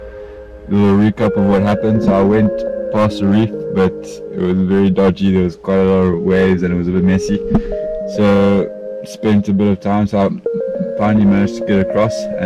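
No technical fault can be heard anywhere in the audio, and the signal stays steady and intact throughout.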